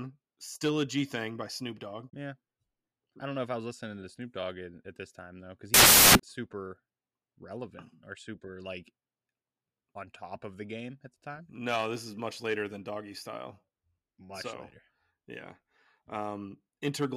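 Speech, with one fault: samples built from the wrong bytes, from 5.74 s to 6.20 s, immediately after "this time though because". For just under half a second the signal turns into loud, harsh broadband noise. The reader has assembled each sample's bytes incorrectly, whether offset by one byte, in reversed order or with the wrong alignment, so the rapidly fluctuating low-order bits land in the most significant positions.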